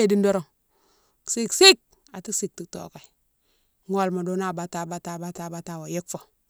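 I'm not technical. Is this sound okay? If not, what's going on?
No, there's one small glitch. At about 5.37 s you can hear a repeated buffer: the playback device didn't get the next chunk of audio in time, so it played the last chunk again. That chunk is tiny, about 11 milliseconds, and it plays twice, so instead of a stutter you get a quick click or blip. Nothing seems to actually go missing; the sound just catches for an instant and carries on.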